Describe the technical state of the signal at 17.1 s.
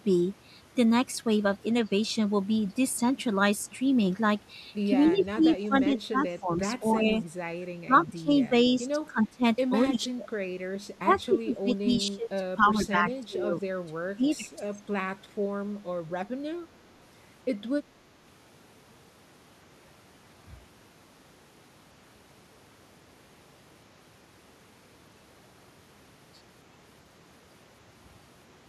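At 17.1 s the speech signal is intact, with no dropout, clipping, distortion or other audible fault at that point.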